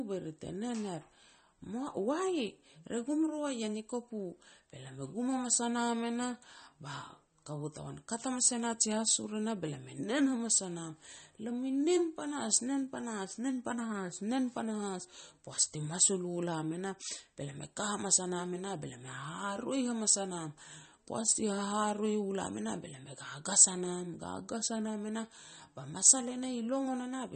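A starved encoder is the likely cause, consistent with MP3 compression at around 32 kbps: it discards treble and thins out weak detail. Throughout, nothing sounds above 8.4 kHz, so s sounds turn dull, while the speech carries plainly audible watery swirling and smeared onsets.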